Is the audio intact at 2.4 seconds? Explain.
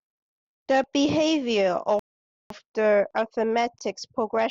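No. At 2.4 seconds playback sits inside a rebuffering stall that runs from 1.99 to 2.50 s. The player ran out of downloaded audio and paused until more arrived. You hear the speech cut to silence for about 0.51 s. Then it resumes exactly where it stopped. No speech is lost or skipped. The gap simply adds half a second of dead air at that moment.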